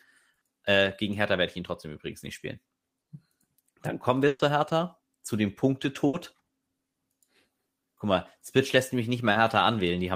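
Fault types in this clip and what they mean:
Burst of packet loss at 0.35, 3.01, 4.27 and 6.07 s: 60 ms lost, 120 ms at 4.27 s; the last sound is held, faded, then skips ahead.
Short concealed packet loss at 9.33 s, after "lässt nämlich": 20 ms arrived too late; the preceding sound was extended and blended back, leaving a brief smear.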